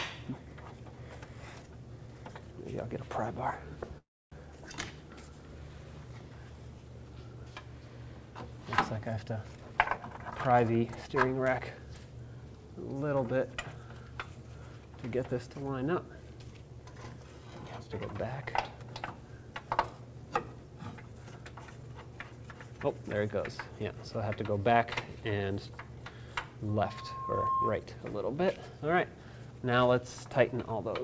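From 3.98 to 4.35 s, packets were likely held up in transit and the jitter buffer ran dry, a call audio freeze. The receiver stretched the last sound into a fading buzz, then about 270 ms of silence, before resuming where it stopped, so nothing is lost but the audio lands roughly 337 ms later.

Between 9.57 and 11.95 s, a jitter buffer speed-up occurs. Too much audio had built up, so the receiver trimmed many short pitch-period slices, removing about a third of a second in total. Playback runs at about 114% with unchanged pitch and sounds noticeably hurried.

From 26.68 to 27.86 s, a loudspeaker feedback squeal builds. The microphone picks up its own loudspeaker, and at 1.1 kHz the loop gain rises above one, so a single tone grows over well under a second into a squeal a few decibels louder than the surrounding sound. Throughout, nothing is heard above 8 kHz, consistent with a G.722 call path.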